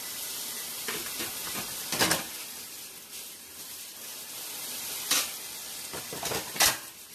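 Generation loss runs through the whole clip of sounds: it has a swirly, smeared, hollow quality, attacks are blurred, and nothing is present above 14 kHz. The likely cause is repeated lossy coding, with the sound decoded and re-encoded about four times, each pass quantising on a shifted frame grid so noise and spectral holes pile up. The character fits an AAC-LC chain at around 64 kbit/s.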